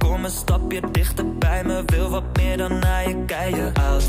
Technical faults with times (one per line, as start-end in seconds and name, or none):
2.54-3.54 periodic USB or driver dropouts